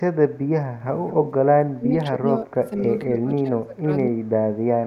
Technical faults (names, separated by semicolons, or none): echo leak; speech suppressed in double talk